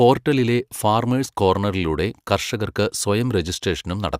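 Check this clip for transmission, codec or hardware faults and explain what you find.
Nothing stood out on listening to this speech recording.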